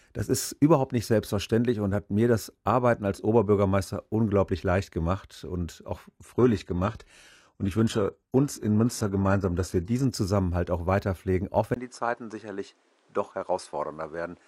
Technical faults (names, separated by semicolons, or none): adaptive stream at a lower bitrate; input switched to a poorer device